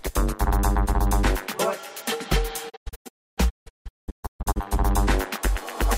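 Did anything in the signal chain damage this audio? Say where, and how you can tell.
Yes: a digital broadcast dropout from 2.68 to 4.58 s, at the receiver. The sound fades out over 20 ms in several short holes, the longest 288 ms, losing about 1.4 s of programme. Frames that were lost or failed their checksum were muted until clean ones returned.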